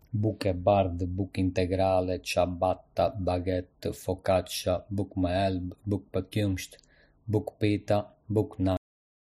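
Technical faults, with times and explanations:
8.77 s to 9.40 s, cut-off end: the speech stops abruptly at 8.77 s in the middle of a sound, leaving about 0.63 s of digital silence with no natural decay, because the final buffers of audio were never written out or played.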